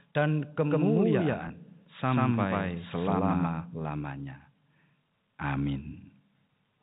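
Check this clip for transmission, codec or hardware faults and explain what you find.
Two faults stand out in this speech clip. The telephone-band coding itself passes cleanly, with nothing above 4 kHz as expected.

From 0.58 s to 3.84 s there is a doubled audio track. A full-band copy of the speech trails the original by around 150 ms, at roughly the same level. It has no decay or room colour. It starts and stops abruptly. The likely cause is a second, slower capture path.

From 1.48 s to 1.50 s there is packet loss with pitch repetition. About 20 ms of audio is missing, which points to a single lost packet. The receiver repeats the last pitch period to fill the gap. This is heard as a brief, slightly held buzz.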